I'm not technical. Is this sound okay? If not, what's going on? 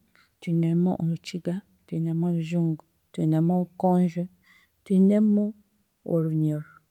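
Yes, nothing in this speech recording points to a technical problem. There is no moment where anything goes wrong with how the sound was captured or passed along.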